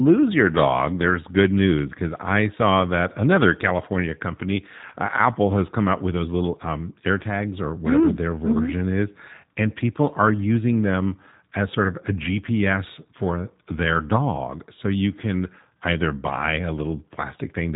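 Speech passed through the G.729 codec (the G.729A variant) for the whole clip, with the plainly audible roughness and band-limiting typical of an 8 kbit/s VoIP stream. The codec discards the waveform and rebuilds each 10 ms frame from a vocal tract filter, a pitch predictor and a handful of pulses, passing nothing above 4 kHz. The result is muffled, slightly buzzy and synthetic-sounding speech that stays intelligible but loses its natural texture and air.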